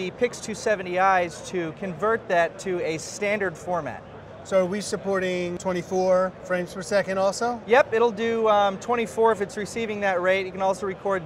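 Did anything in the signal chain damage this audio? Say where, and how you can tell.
No, no signal-chain damage heard.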